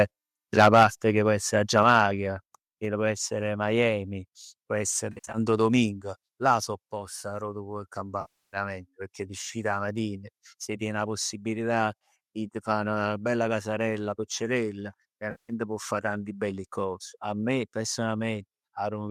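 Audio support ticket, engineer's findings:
Microphone overload, likely input gain set too high at the converter: peak tops flattened at 0.58–0.85 s (about 7 dB over) and 1.77–2.00 s (about 2 dB), giving harsh crackle on loudest syllables.

Microphone volume stepped down, likely call software auto-gain reacting to the clipping: abrupt level drops at 0.83 s and 1.83 s (about 3 dB), then 2.85 s and 6.39 s (about 2 dB).

AAC frame loss with concealment, decoder filling gaps from the last good spectrum: smeared, noisy patch at 5.12–5.38 s (170 ms lost, longest run around 70 ms); longer losses at 8.21–8.57 s (320 ms) and 15.31–15.53 s (180 ms). Low-delay AAC coding itself likely adds only light grain.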